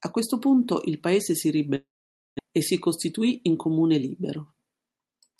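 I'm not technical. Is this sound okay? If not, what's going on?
No. There are two problems, both typical of audio sent over an internet call.

From 1.75 to 2.41 s, right after "punto il paese si", the sound stops arriving. The receiver stretches the last bit into a buzzy tail that fades, then there is about half a second of near silence before the speech picks up again. Roughly 0.6 s of the original is simply gone. The likely cause is a long network dropout, where the connection briefly delivered nothing.

From 3.17 to 3.57 s there is a jitter buffer speed-up. The receiver had built up extra delay, so it shaved out many tiny slices, a few hundredths of a second in total. The speech runs about 8% faster and sounds slightly hurried there, but the pitch stays the same.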